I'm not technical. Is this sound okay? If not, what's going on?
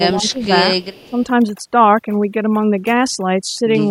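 No. Four problems are audible in this speech recording.

Computer activity noise runs under the whole clip: a faint, low buzz pulsing roughly 70 times a second. It comes from the computer's own electronics leaking into the audio wiring, so it follows what the machine is doing, not the speech. That's the difference from ordinary room hum or hiss, which stays steady and doesn't stutter with the computer's workload.

Overdone noise removal also affects the whole recording. A cleanup tool was set too aggressively, so between phrases the background drops to an unnatural near-silence with faint twinkling specks. A genuinely quiet room sounds smooth and natural. Here the quiet sounds scrubbed, and softer parts of the speech have been shaved away along with the noise.

Speech suppressed in double talk shows up from 0.14 to 0.51 s and again from 1.02 to 1.13 s. The voice sinks noticeably, then recovers. 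The likely cause is someone on the other end talking at the same moment, so the call software, unable to tell this voice apart from the loudspeaker's echo, turned both down.

Echo leak appears from 0.36 to 0.45 s and from 0.81 to 1.23 s as a faint, delayed copy of the voice trailing about 292 ms behind. It's likely a loudspeaker's sound getting back into a microphone without being fully cancelled. A room's natural echo blends smoothly into the voice. This copy is a distinct, late repeat.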